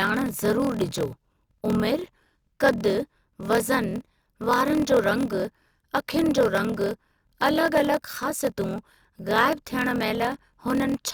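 A block size mismatch with zero padding runs through the whole clip, from start to finish. Each block written by one stage is shorter than the block the next stage reads, so every block ends in a short stretch of silence. Those regular gaps produce a buzz at 41.7 Hz under the speech, and the talking plays back at 0.889 times normal speed while keeping roughly its usual pitch. The pattern fits 1024-sample blocks being written into longer read blocks.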